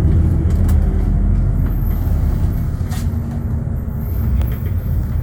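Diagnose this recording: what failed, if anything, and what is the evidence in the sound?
Nothing failed; the sound gives no evidence of a fault at any stage of this recording.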